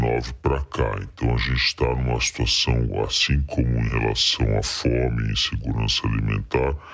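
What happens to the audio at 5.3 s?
At 5.3 s you're hearing a wrong sample rate fault that runs through the whole clip. The speech plays at two-thirds speed and about 7 semitones low, so it sounds slow and heavy, which fits 24 kHz audio played back at 16 kHz without conversion.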